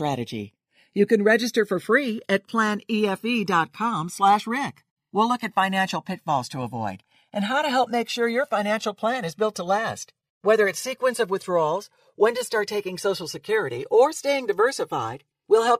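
Channels drifting apart runs throughout this speech clip. The two channels sound like they came from devices on separate clocks, mismatched by something like 150 ppm, so their delay slides to a couple of milliseconds. In mono, comb notches sweep slowly, giving a gradual flanging.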